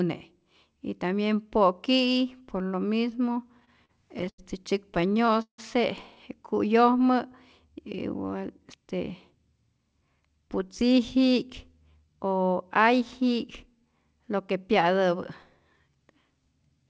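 From 3.60 to 4.40 s, packets reached the receiver late, and its jitter buffer ran dry six times. Each time, the receiver extended the last sound to cover the wait, about 183 ms in all and the longest gap 88 ms, so nearly a quarter of that stretch is filled in. These repeated stalls (stutter) make the speech drag and catch, although nothing is actually lost.

The same starvation returns from 4.94 to 5.60 s, again with six gaps. This time about 215 ms is filled in, a third of the span. The longest wait, 162 ms, is long enough that the extended sound fades before the speech resumes, so the stutter sounds heavier here.

From 8.24 to 9.36 s, the buffer had built up more audio than it aims to hold. To cut that delay, the receiver repeatedly removed short pitch-period pieces, about a tenth of a second in total. This jitter buffer speed-up makes the speech run at about 109% of its normal rate without any change in pitch, and that passage sounds hurried.

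Throughout the clip, nothing is heard above 8 kHz, which points to a wideband call codec such as G.722.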